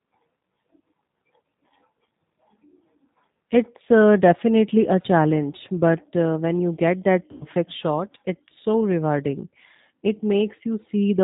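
Right from the start the whole thing runs through the G.729 codec, most likely the G.729A variant. The audio is squeezed to a narrowband band with nothing above 4 kHz, so it sounds boxed-in and a bit rough and synthetic. That comes from the decoder rebuilding each 10 ms frame from a vocal tract filter, a pitch guess and a handful of pulses. The damage is plainly audible, consistent with an 8 kbit/s stream.

At about 7.32 s, right after "when you get that", there's VoIP packet loss concealed by the speech codec, lasting until about 7.46 s before "shot it's so rewarding". Around 90 ms of audio went missing, which fits three dropped packets. The decoder filled the gap by stretching its last pitch and filter into a buzzy or noisy, fading smear, and the sound stays weak for a moment after the real data returns.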